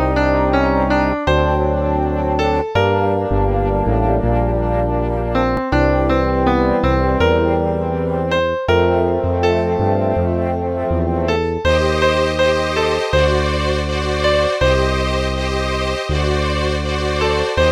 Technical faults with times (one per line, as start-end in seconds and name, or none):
5.57 repeated buffer